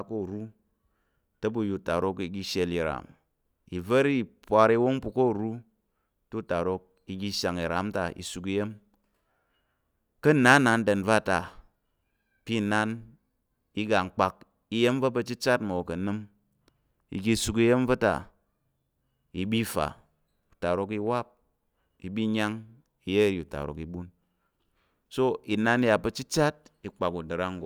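Listening to this speech recording, nothing stood out as a technical problem at any point.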